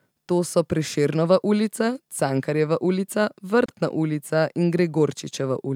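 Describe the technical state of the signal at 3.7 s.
A gap at a join of encoded pieces runs from 3.66 to 3.68 s, just before "ulica in". Separately encoded 4 s pieces were joined with encoder start delay and end padding left in, so the speech drops into a 28 ms gap with smeared edges, then resumes where it stopped.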